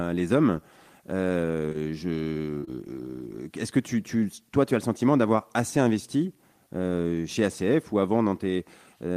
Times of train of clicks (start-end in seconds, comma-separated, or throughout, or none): none